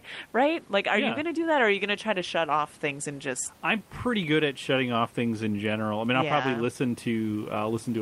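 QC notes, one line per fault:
Nothing to flag on this speech clip, just some ordinary room noise in the background sitting about 31 dB under the speech, which is part of the recording itself.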